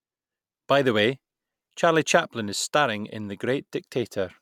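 No technical faults can be heard anywhere in the speech recording. There is nothing in it to mark with a time or trace to a cause.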